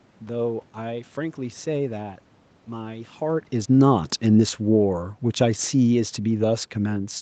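From 3.24 s to 7.16 s the automatic gain falling brings the speech down by about 7 dB. The gain control judged the input too loud, or its background noise too strong, and eased its gain back gradually. Speech and room noise sink together, unlike the talker moving near 3 s.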